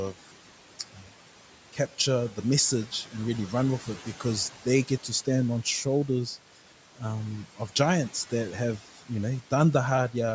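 Noise suppressor artifacts run through the whole clip. The suppressor pulls the room noise, which sits about 19 dB below the speech, down by about 12 dB frame by frame, so the background dips between phrases and swells back underneath them.

From 0.79 to 1.12 s there's speech cut by the noise suppressor. It mistook part of the speech for noise and turned it down by up to about 10 dB, affecting only around a tenth of a second in total. A soft sound there comes out swallowed and faint. The call microphone processing caps everything at 8 kHz.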